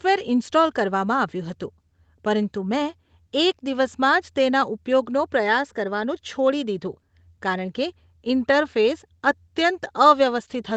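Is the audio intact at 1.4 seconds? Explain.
Yes, the audio is intact at 1.4 seconds, with only the ordinary band limit of a call path, nothing above about 8 kHz, which is not a fault.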